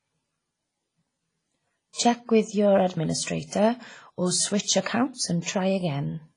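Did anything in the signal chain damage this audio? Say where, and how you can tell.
Yes, and it happened at the codec stage. The whole speech clip is band-limited, with nothing above 10.1 kHz, and has that ringing, washy quality and a hiss that swells and fades with the voice. That's likely WMA compression. The coarse quantisation spreads noise across each long transform block and drops weaker spectral lines entirely. The heaviness of the damage fits a low bitrate of around 24 kbps.

There's also pre-echo, from that same block-based coding. A short hiss runs ahead of a sharp attack at 1.93 to 1.98 s, about 54 ms of smear. It happens again at 5.14 to 5.17 s, about 37 ms, just after "your administrator or switch". Both attacks landed late in their blocks, so noise sized for the loud onset spilled back into the quiet lead-in and softened the attacks.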